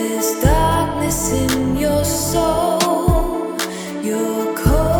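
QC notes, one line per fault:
No faults detected.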